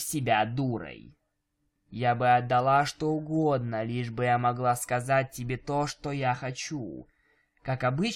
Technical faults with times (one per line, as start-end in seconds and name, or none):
none